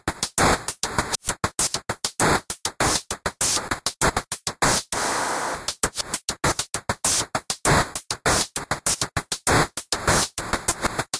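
No technical faults can be heard.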